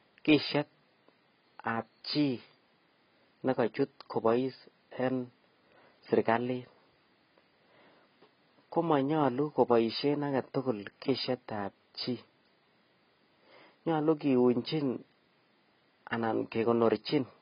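Speech with heavy damage from likely AAC compression throughout, consistent with about 16 kbps. Nothing above 5 kHz, a hard ceiling on a spectrogram, plus smeared, warbling sibilants.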